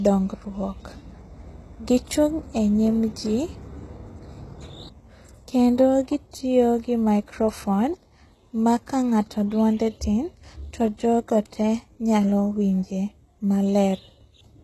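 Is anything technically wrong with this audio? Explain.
Yes. Throughout the speech, the treble was likely rebuilt by HE-AAC compression's band replication at a bitrate near 16 kbps. Copied, misaligned harmonics make s sounds gritty and metallic, with nothing above 12.3 kHz.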